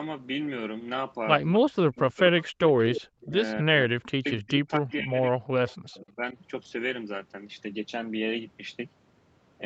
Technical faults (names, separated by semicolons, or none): echo leak; speech suppressed in double talk; background gated by the echo canceller